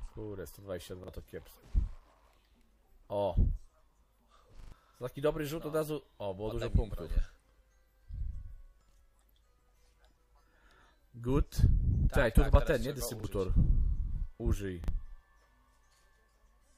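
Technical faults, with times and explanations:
1.04 s, 13.2 s and 14.84 s, repeated buffer: a 40 ms slice of sound plays twice with a hard join, heard as a brief stutter. The content is repeated rather than dropped to silence, which sets it apart from a dropout. The timing suggests a 40 ms playback buffer.
4.60–4.72 s, repeated buffer: the same 40 ms slice plays four times in a row, producing a short stutter at roughly a 25 Hz repeat rate. About a tenth of a second of new audio is skipped when playback resumes.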